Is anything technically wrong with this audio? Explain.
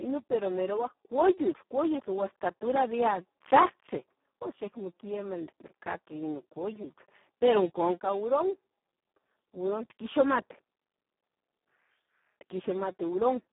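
Yes. Speex codec damage runs throughout the speech. Too few excitation bits, which fits about 4 kbps, make it noisy and hoarse. Nothing sounds above 3.8 kHz.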